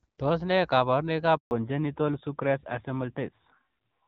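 At 1.37 s, right after "ne kabarunoik", a handover gap cuts the speech for 140 ms while the call switches networks. Unlike packet-loss concealment, nothing is patched over, so there is only a clean silence.

From 1.51 s onward comes a fallback to narrowband. The fairly clean HD Voice band collapses to nothing above 4 kHz, and the speech turns duller and rougher, consistent with an AMR narrowband codec. It is a lasting codec change, not a passing filter.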